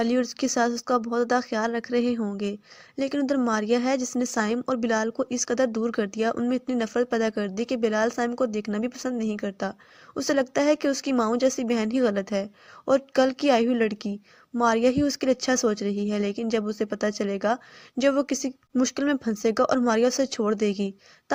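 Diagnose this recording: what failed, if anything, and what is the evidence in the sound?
Clock drift between sender and receiver is a network and jitter-buffer fault. The sender's clock runs about 4 percent fast, so more audio arrives than the receiver plays out. The buffer keeps filling. Small timing hiccups recur through the whole recording.

Repeated timing corrections run from 0.23 s to 21.2 s. The receiver trims short pieces to keep pace with audio arriving at 104 percent speed. Every cut goes the same way, at uneven intervals. Each is slight, heard as a faint stumble or unsteady tempo.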